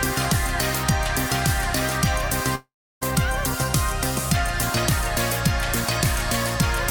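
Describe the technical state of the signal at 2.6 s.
At 2.6 s you're inside what's likely a long network dropout, running from about 2.55 to 3.03 s. The receiver stretches the last sound into a fading buzz, roughly a third of a second of near-silence follows, and the audio resumes minus the lost stretch.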